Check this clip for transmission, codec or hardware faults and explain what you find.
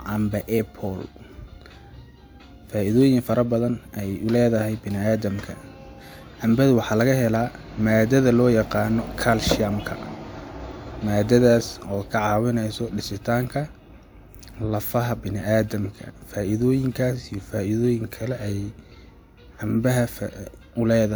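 No faults detected.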